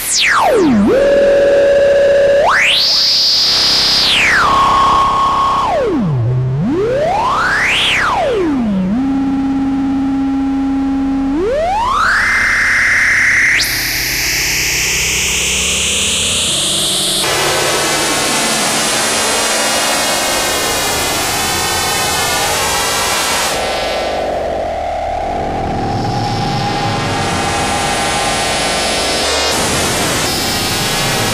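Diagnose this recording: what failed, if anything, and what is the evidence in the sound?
Nothing failed here, and listening through, there's no sign of trouble at any stage of the chain, so there's nothing to diagnose.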